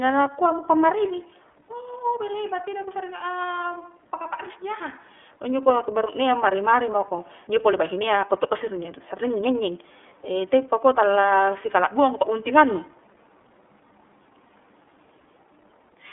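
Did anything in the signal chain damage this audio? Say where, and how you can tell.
Yes: iLBC codec damage runs throughout. Nothing passes above 3.7 kHz, and the speech sounds rough and synthetic from independently coded 30 ms frames, which fits iLBC's 13.33 kbps mode.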